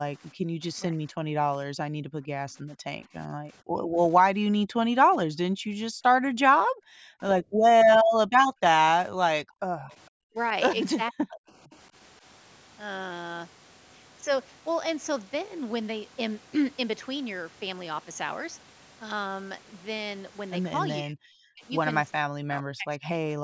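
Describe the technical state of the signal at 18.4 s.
At 18.4 s the speech is intact, with no technical fault, only the normal band limit of call microphone processing, which leaves nothing above 8 kHz.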